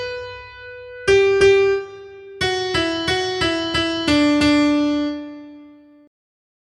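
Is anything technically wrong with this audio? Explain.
No, nothing is technically wrong with this audio.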